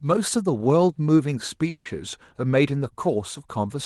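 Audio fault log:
1.69 to 1.87 s, long network dropout: The speech breaks off for about 0.18 s. The last sound is stretched into a buzzy, fading tone for about 160 ms, with no dead silence. When the speech resumes, about 160 ms of it is simply gone. The likely cause is that packets stopped arriving and the receiver invented sound to cover the hole. Through the Opus call path the speech keeps its usual band up to about 12 kHz.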